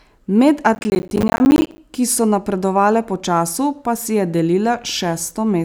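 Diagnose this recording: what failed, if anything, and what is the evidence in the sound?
Processor overload crackle from 0.75 to 1.78 s, ending just before "ki so napredovale po", points to the driver or buffer stage. Dozens of buffers, which fits roughly 10 ms each, missed their deadlines and dropped to silence, and the hard-edged gaps blur together into a gritty crackle over the speech.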